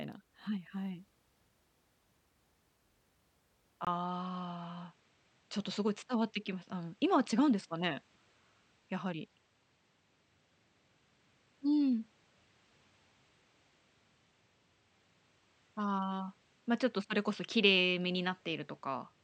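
At 3.85 s the speech drops out for about 20 ms, and from then to the end it sounds duller, most likely because the input switched to a poorer device. Nothing above 8.2 kHz survives, while loudness stays about the same and a new noise floor sits roughly 45 dB below the speech. A spectrogram shows a hard ceiling at 8.2 kHz from the switch onward. The waveform shows a brief flat gap with no change in overall level.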